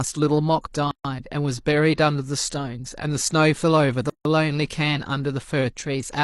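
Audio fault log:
0.91–1.05 s and 4.10–4.25 s, gap at a join of encoded pieces: separately encoded segments were joined without trimming, so each kept its encoder start-up delay and final-frame padding. The speech breaks off in a gap of 137 ms, then 155 ms, with smeared abrupt edges, and then resumes where it stopped.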